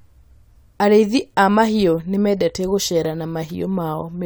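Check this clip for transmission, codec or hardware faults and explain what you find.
Listening through this speech recording, nothing stood out as a problem.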